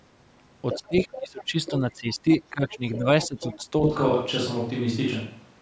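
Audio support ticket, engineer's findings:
Other side's voice leaking through: second voice at 0.71–1.71 s, 2.32–2.37 s and 2.72–3.64 s, faint to moderately loud; likely residual loudspeaker echo the canceller missed. A separate talker, not a reverb tail.

Speech suppressed in double talk: near talker dips by up to about 15 dB across 0.78–3.72 s, roughly 1.5 s in total, coinciding with the leaked voice. Likely the echo canceller ducking both sides, not a dropout.

Switch to a distant microphone: sudden change at 3.84 s to the end, roomy and hollow with thinner bass, level about the same, room noise well below speech. Likely the far microphone replacing the close one. The abrupt onset rules out gradual drift.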